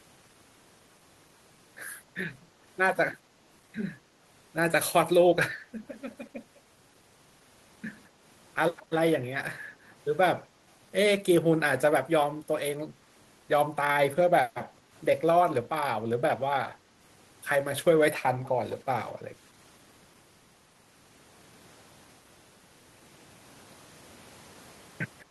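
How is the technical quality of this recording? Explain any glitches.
Two brief echo leaks mar the speech, at 8.76 to 8.86 s and 18.44 to 18.49 s. A loudspeaker's echo canceller likely let residual pickup through, so a faint copy of the voice returns about 200 ms late, well below the speech.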